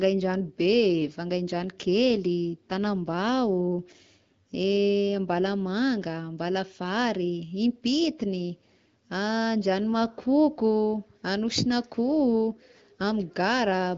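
No technical faults can be heard in this speech, which comes through an AMR wideband (HD Voice) link at 12.65 kbit/s with nothing above about 7.7 kHz.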